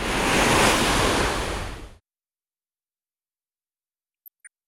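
From 0.37 to 0.66 s, and again from 4.26 to 4.47 s, DAB burbling breaks in. Weak reception lets bit errors, around 0.4 and 0.5 percent, slip past error correction. Corrupt scale factors make sub-bands leap in level for up to a frame. It puts short blips of noise over the sound.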